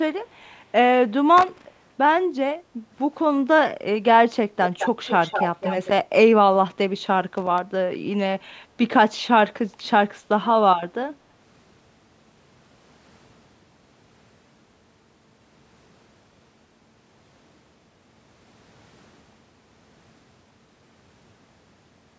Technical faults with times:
1.37-1.65 loose connector crackle
4.78-5.89 echo leak
7.37-7.58 loose connector crackle

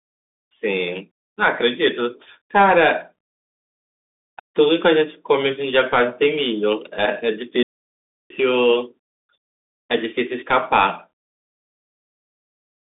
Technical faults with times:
0.00-12.93 Bluetooth CVSD headset codec
7.63-8.30 playback stall

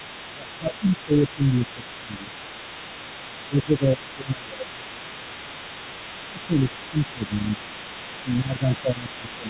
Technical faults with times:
0.00-9.49 other side's voice leaking through
0.33-2.35 speech suppressed in double talk
3.48-4.90 speech suppressed in double talk
6.20-6.66 speech suppressed in double talk
6.91-7.63 speech suppressed in double talk
8.22-9.49 speech suppressed in double talk

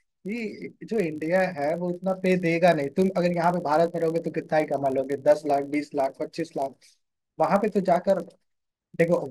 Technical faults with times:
0.00-9.31 filter restarted on every block

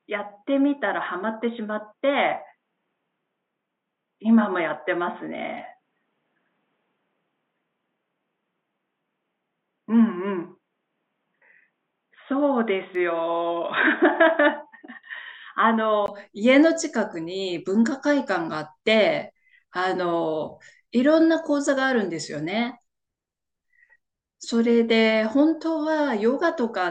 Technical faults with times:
0.00-16.08 input switched to a poorer device

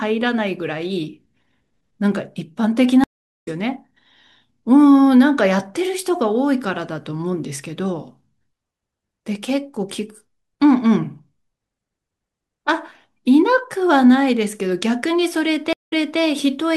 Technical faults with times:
3.04-3.48 stream reconnect
15.73-16.20 stream reconnect

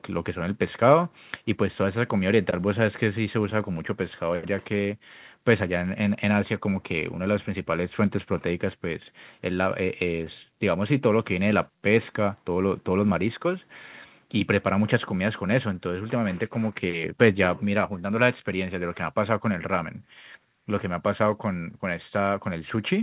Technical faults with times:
none

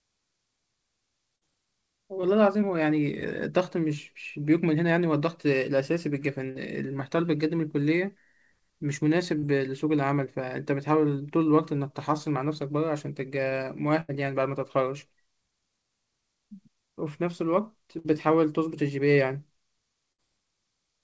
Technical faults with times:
1.36-1.43 burst of packet loss
2.21-2.25 short concealed packet loss
6.51-6.57 short concealed packet loss
9.39-9.45 short concealed packet loss
14.01-14.10 burst of packet loss
17.98-18.06 burst of packet loss
20.12-20.20 burst of packet loss

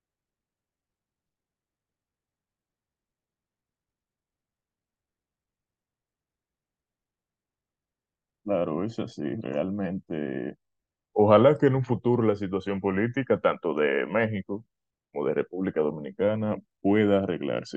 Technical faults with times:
none

